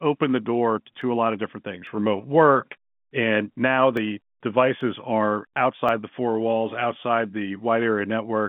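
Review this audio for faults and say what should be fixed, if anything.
Dropped samples at 1.02, 1.87, 3.97, 4.81 and 5.89 s: each is a single sharp click in the speech, heard over the narrow telephone band, where the waveform jumps ahead because about 0.7 ms of samples is likely missing, too brief to lose any sound. To prevent it, give the capture and transfer path enough buffering that samples are never skipped when a read or write falls behind.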